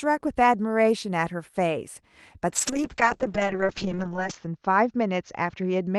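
From 2.50 s onward, a call bitrate drop makes the speech rough and muffled as its top narrows from 12 kHz to 8 kHz. The coarseness comes without the gaps of packet loss.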